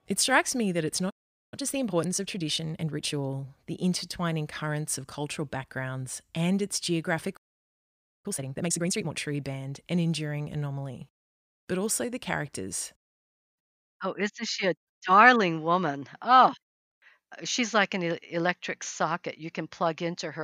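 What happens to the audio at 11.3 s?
Nothing goes wrong at 11.3 s; the speech carries on cleanly through that moment without any dropout, click, glitch or other audible fault.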